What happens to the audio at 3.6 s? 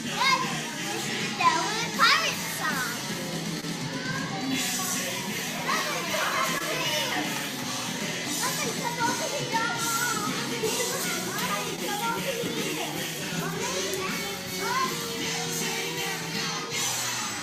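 A brief smear or small wobble passes through the audio from about 3.60 to 3.64 s. This is short concealed packet loss: a short stretch of the stream failed to reach the decoder in time. The receiver filled the gap by stretching the sound that came just before it, carrying its pitch or its noisy texture forward for about 18 ms, then blended back into the real signal. The missing stretch is about 20 ms.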